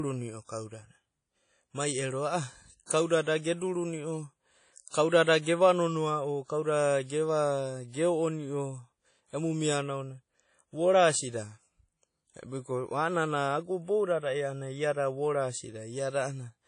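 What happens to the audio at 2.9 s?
A pre-echo runs from 2.86 to 2.90 s, just before "kauda da ge". A short hiss leaks about 42 ms ahead of the attack and blurs it. This is WMA compression spreading its quantisation noise across the whole transform block. The clip's washy, ringing quality and nothing above about 10.1 kHz point to a low bitrate, likely around 32 kbps.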